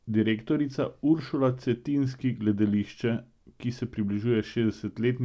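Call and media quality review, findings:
Nothing to log on this one: the speech comes across the call path with its content stopping at 8 kHz, as you'd expect from a wideband codec like G.722, and no faults turn up anywhere in the clip.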